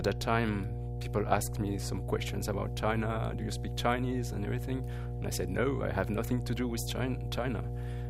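Mains hum runs through the whole clip, from the first moment to the last. It is a steady low tone at 60 Hz, with a few low harmonics stacked above it. The hum sits only a little below the wanted sound, around 5 dB under it, so it is loud and constant. Power-line current has leaked into the signal path. A ground loop or a transformer close to the cabling would cause this.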